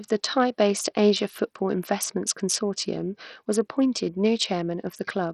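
Speech, with heavy codec damage throughout. The treble sounds thin and flickers in and out. A gritty noise with aliasing rides on the voice. The likely cause is Bluetooth SBC compression. A starved bit pool leaves the upper sub-bands almost empty, which fits a rate near 64 kbps.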